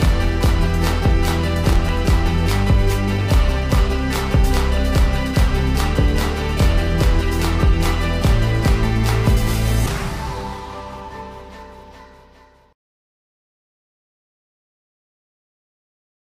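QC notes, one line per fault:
1.65–1.89 s, processor overload crackle: a short gritty tearing burst as a handful of few-millisecond buffers miss their deadlines and replay stale audio with hard edges.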